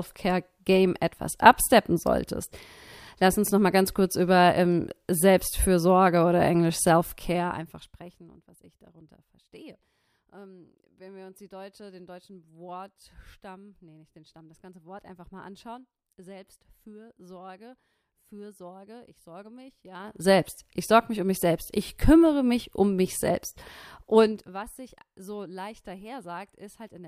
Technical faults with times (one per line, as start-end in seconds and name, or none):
7.16-8.48 zipper noise
19.92-20.28 zipper noise
24.20-24.56 zipper noise